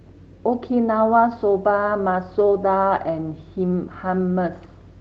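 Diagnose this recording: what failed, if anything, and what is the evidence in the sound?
Nothing in the speech has failed; it has passed through a WebRTC call path whose content tops out around 8 kHz, consistent with a wideband Opus setting at a moderate bitrate, and no dropouts, glitches or other faults are audible anywhere along it.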